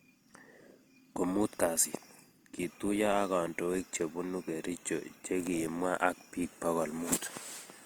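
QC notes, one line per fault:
throughout, Opus compression: grainy, rough speech without MP3-like swirl, bandwidth intact to 20.2 kHz; likely Opus music mode near 24 kbps noise-filling bands.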